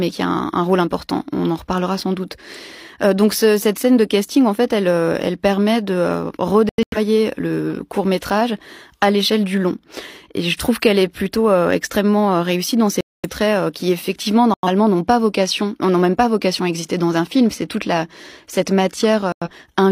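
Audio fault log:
6.69–6.98 s: corrupt frame muted. The speech cuts abruptly to silence for 0.29 s. The decoder likely rejected damaged frames and the gap was filled with silence.
13.01–13.30 s: corrupt frame muted. A sudden 0.30 s hole drops out of the speech. The length suggests several consecutive codec frames were discarded and replaced with silence.
14.54–14.68 s: corrupt frame muted. A shorter 0.14 s silence starts abruptly. It sounds like a couple of lost frames. The surrounding timing is unchanged.
19.32–19.50 s: corrupt frame muted. A 0.18 s silent gap cuts in without warning. Rejected frames were muted rather than concealed, so the speech simply stops and resumes.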